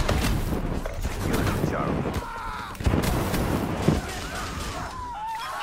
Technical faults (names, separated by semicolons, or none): none